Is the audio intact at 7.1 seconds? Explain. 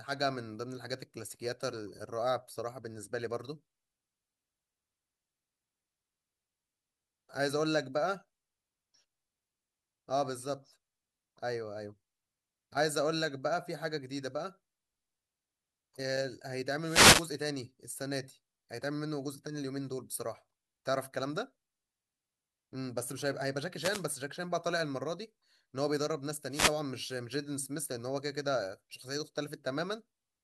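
Yes, at 7.1 seconds the speech runs through cleanly, with no dropout, click, distortion or other fault to be heard at that moment.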